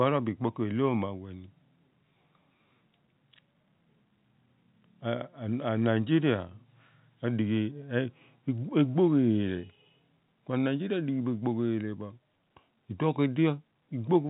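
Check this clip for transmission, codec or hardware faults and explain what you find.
No transmission, codec or hardware faults can be heard in this speech. It carries the sound of ordinary G.711 telephone coding, with the band stopping at about 3.8 kHz and at most a faint quantisation hiss riding under the voice.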